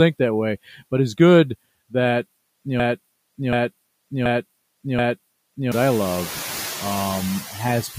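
Noise suppressor artifacts run through the whole clip: the background is pulled down by about 16 dB, leaving the room noise pumping under the speech. From 0.68 to 0.92 s, just after "that way", the noise suppressor cuts speech, dropping it by up to about 8 dB for roughly a tenth of a second, so that stretch sounds swallowed. From 2.80 to 5.72 s, after "it's good that you" and before "I love", a broken-record loop repeats the same 730 ms fragment four times back to back, likely a stalled player or stream, and the audio meant for that span is lost. At 7.42 to 7.57 s the suppressor again takes speech for noise, turning it down by about 11 dB for around 150 ms.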